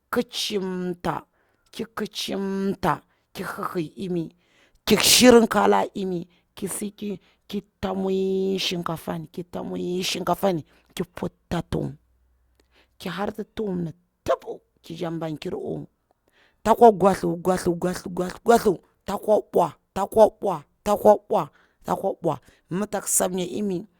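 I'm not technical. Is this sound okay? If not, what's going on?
Yes, this one sounds fine: nothing in the recording jumps out as a problem, so you can relax about it.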